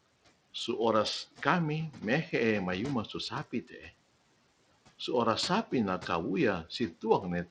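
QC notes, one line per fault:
Throughout, Bluetooth SBC compression: gritty, flickering treble with a coarse grainy edge on the speech, likely from a starved SBC bit pool, which fits a low rate of around 80 kbps.
3.51 to 3.91 s, speech cut by the noise suppressor: just after "mehe'e mayuma su", about a fifth of a second of quiet speech drops by up to about 15 dB because the suppressor mistook it for background noise.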